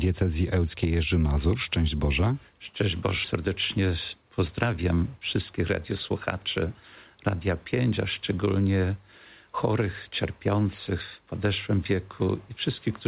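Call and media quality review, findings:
Jitter buffer speed-up, 3.48 to 4.84 s. Audio runs about 8% fast, same pitch, sounds hurried. Receiver-side jitter buffer, overfilled after a late packet burst, cut repeated pitch-period slices to drain the backlog. Roughly a tenth of a second removed. Call path band-limited, nothing above 4 kHz, consistent with G.711 A-law at 64 kbps.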